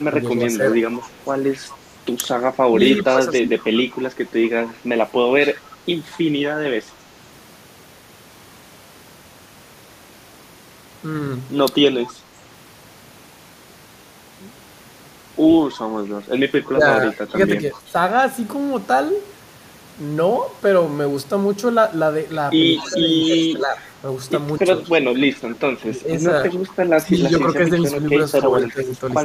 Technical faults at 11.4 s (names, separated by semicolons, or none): none